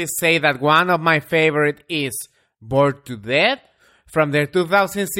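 The speech signal runs without any audible interruption, distortion or level disturbance at any point in the recording.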